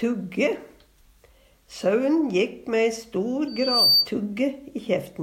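From 3.47 s to 4.09 s a loudspeaker feedback squeal takes over. A single piercing tone near 4.6 kHz rises out of the sound, swelling over roughly 0.4 s until it sits about 10 dB above the programme material. The microphone was picking up the loudspeaker it was driving, and at 4.6 kHz the loop gain went above unity, so that one frequency kept reinforcing itself.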